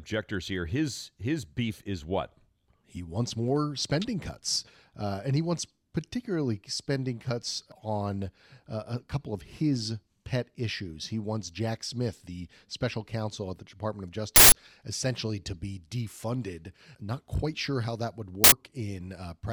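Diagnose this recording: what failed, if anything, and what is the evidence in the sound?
Two short, loud bursts of harsh digital noise cut through the speech: one from 14.36 to 14.52 s, just before "essentially to be defunded", and one from 18.44 to 18.52 s, just after "sure how that would". This is an uninitialised buffer fault at the driver or buffer stage. Blocks of about 160 ms and 80 ms reached the output before any audio was written into them, so leftover memory contents played as samples.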